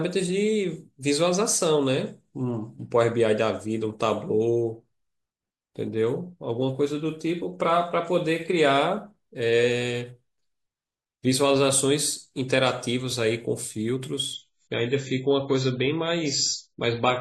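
A speech clip in which an adaptive stream drops to a lower bitrate from 14.34 s to the end at 17.21 s, likely because the connection slowed. The treble abruptly stops at about 7.6 kHz and codec artefacts rise, with no gap at the switch, consistent with a very low-bitrate AAC rendition.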